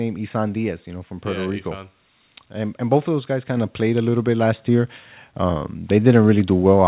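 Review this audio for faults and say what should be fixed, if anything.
The microphone volume is stepped up twice in this speech, at 3.57 s and again at 4.59 s. Each time the level jumps by about 4 dB. The voice and the background noise rise together, which shows the change happened at the input device, not in the talker. The call software judged the microphone too quiet and raised its input volume in one step. The call path itself cuts everything above 4 kHz, which fits a narrowband G.711 codec. To prevent the jumps, disable automatic microphone gain adjustment in the call software and set the input level manually.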